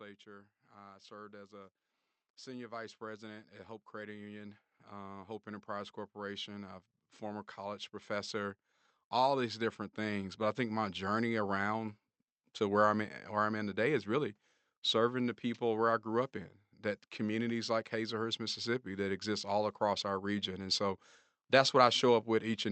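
Automatic gain rising affects this speech clip: from 2.44 s to 11.54 s the gain control judged the input too quiet and kept raising its gain, by about 15 dB in all. The voice and the background noise swell slowly together, with the high frequencies cut off above 8 kHz by the call codec.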